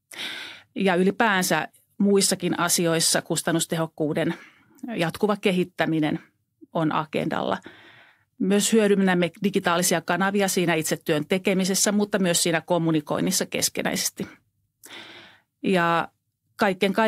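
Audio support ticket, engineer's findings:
No faults found on the speech clip; nothing to report in this ticket.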